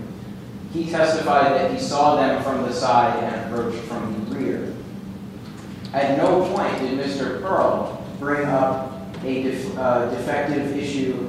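Nothing stood out on listening to this recording.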